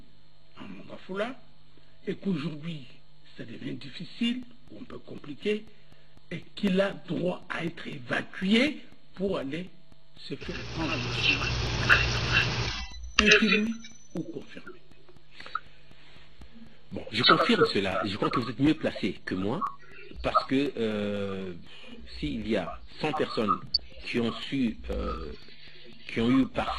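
From 4.43 s to 26.68 s, periodic USB or driver dropouts blank about 2 ms of audio every 0.25 s, giving steady ticks; the waveform shows evenly spaced gaps, the spectrogram thin vertical lines. Between 23.67 and 23.80 s, DAB burbling from reception bit errors puts short blips of noise in individual sub-bands, seen as scattered blocky patches across roughly ten frames.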